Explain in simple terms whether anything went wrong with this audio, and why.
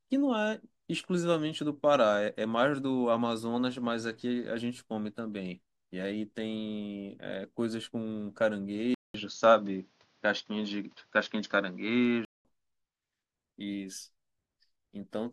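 Input switched to a poorer device, from 8.94 to 12.45 s. After a short 200 ms silence, the speech turns dull, losing everything above 6.9 kHz, shifts noticeably in loudness and picks up a faint new background noise. The recording likely jumped to a lower-quality microphone, then back.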